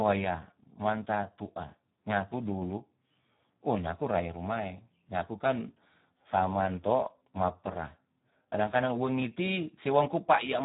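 From start to finish the speech carries heavy Speex codec damage. The hoarse, noisy texture points to roughly an 8 kbps setting, too few bits to code the excitation properly. Nothing remains above 3.8 kHz, so the sound is dull and narrowband.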